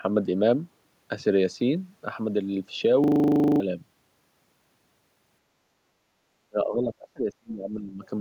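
A speech recording with three faults. From 3.04 to 3.6 s a system hang loop repeats one 40 ms slice 14 times, a 25 Hz buzz visible as identical repeating waveform blocks, with about half a second of speech lost. At 5.97 to 6.19 s the background is gated by the echo canceller, dipping about 6 dB, a brief shallow notch in the noise floor. From 6.49 to 8.04 s the speech drops and breaks up, by as much as roughly 30 dB, likely speech suppressed in double talk, seen as faded, patchy energy on the spectrogram.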